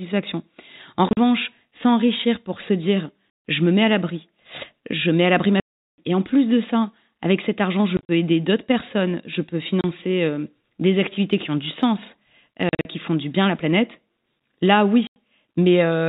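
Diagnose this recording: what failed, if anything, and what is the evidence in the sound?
Packet loss filled with silence at 1.09, 3.3, 5.6, 7.97, 9.81, 12.69 and 15.07 s is a network-stage fault. The receiver substituted digital silence for missing packets, cutting hard-edged holes of 30 to 380 ms into the speech, all multiples that fit a 10 ms packet.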